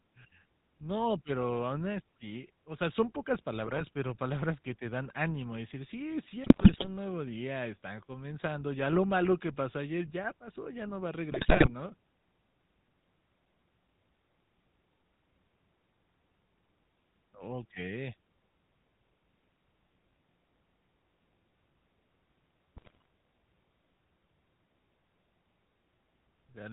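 GSM full-rate codec coloring throughout: the vocal tract is modelled and driven by sparse regular pulses, nothing passes above 4 kHz, and the speech sounds plainly buzzy and gravelly. GSM bit errors at 3.56–3.82, 6.44–6.88, 11.31–11.71 and 22.76–23.05 s: corrupted filter, pitch and gain values garble frames into squawks, pops and gargling, heaviest at 6.44 s.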